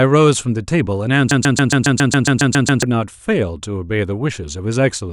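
Something in the playback or encoding chain likely stalled and kept resending its last fragment, producing a broken-record loop: a 0.14 s piece of speech repeats 11 times from 1.31 to 2.83 s, replacing what should have been heard.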